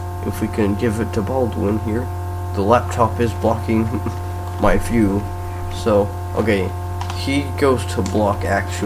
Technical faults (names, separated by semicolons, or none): none